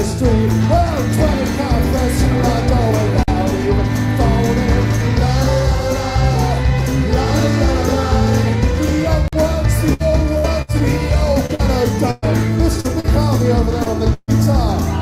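Chunked transport leaves a gap between chunks at 3.23 s and again at 9.28 s. Each hole is about 48 ms of silence, six seconds apart. No audio is lost, but the sound breaks off briefly at each join.

Bursts of packet loss follow at 9.93–10.02 s, 10.38–10.46 s and 10.62–10.70 s. In each, about 60 ms of audio never arrived, and the receiver extended the last sound for roughly 60 to 66 ms while turning it down. The sound then resumes with that stretch gone. A longer burst at 14.13–14.30 s drops 140 ms, bridged by a 143 ms fading continuation that includes 30 ms of silence.

From 11.46 to 13.06 s, repeated packet loss (robotic sound) sets in. Five separate gaps, the longest 116 ms, remove 260 ms in total, and concealment covers 16% of that span. The sound turns choppy, with patched pieces standing in for missing ones.

At 13.84 s, a short concealed packet loss of 20 ms is filled with 17 ms of continued sound and blended back, heard as a brief smear.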